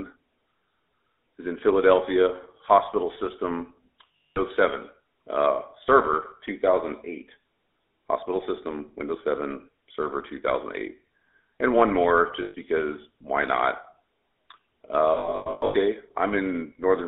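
Throughout the clip, the speech carries the buzzy, gravelly texture of the GSM full-rate codec, with a bandwidth that fits a 13 kbps full-rate link. The codec rebuilds each stretch from a vocal-tract filter driven by a sparse pulse excitation, so the fine detail of the voice is replaced by a coarse, rasping approximation. The line passes only about 300 Hz to 3.6 kHz, which gives a thin, narrowband sound, and the codec damage is plainly audible.

Lost GSM frames interrupt the speech three times. Each time, the decoder holds the parameters of the last good frame, which produces a rough, metallic ring in place of the missing audio. The first loss runs from 4.16 to 4.39 s, right after "hospital system". About 220 ms is missing across a 240 ms span, with a longest run of roughly a fifth of a second. The second, from 12.42 to 12.55 s, falls between "one more" and "because why not" and costs about 120 ms. 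The last, from 15.14 to 15.75 s, is scattered: about 420 ms is lost over 600 ms in runs of no more than about a tenth of a second, giving a stuttering, repeatedly ringing break.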